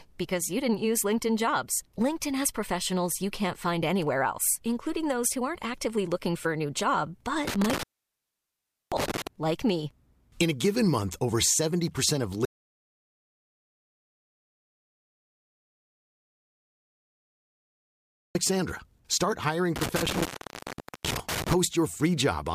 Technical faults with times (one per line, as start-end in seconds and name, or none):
7.47-9.27 intermittent contact
12.45-18.35 audio dropout to silence
19.76-21.54 intermittent contact